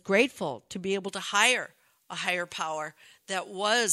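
From about 1.08 s, right after "grateful to be able", pre-emphasis is left on: the treble boost never gets undone, so 10 kHz sits about 11 dB hot, sounding thin, bright and hissy to the end.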